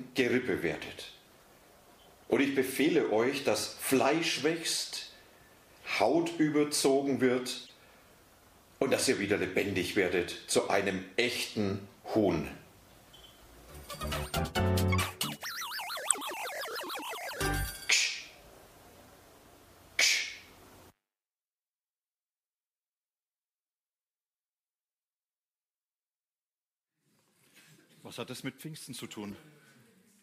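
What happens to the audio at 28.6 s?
Nothing goes wrong at 28.6 s; the audio plays through that moment intact, with no dropout, click, glitch or other fault.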